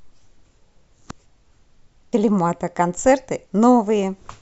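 A short speech recording with one burst of damaged data in a compressed stream from 2.13 to 2.16 s: corrupted bytes make the decoder misread frames and hunt for the next valid header, producing a brief glitch. On a spectrogram it shows as a narrow disruption.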